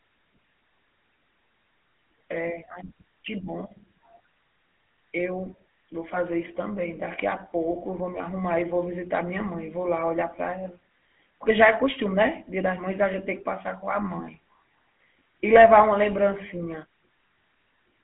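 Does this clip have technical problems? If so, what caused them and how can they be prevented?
Yes. The speech is coded with the GSM full-rate codec for the whole clip. The codec models the vocal tract and excites it with regularly spaced pulses. It keeps only a thinned-out excitation, so the voice turns buzzy and gravelly. The damage is plainly audible. The sound sits in a telephone band of about 150 Hz to 3.4 kHz, with nothing above 3.8 kHz. This fits a 13 kbps phone link. To prevent it, record or transmit through a wideband codec at a higher bitrate.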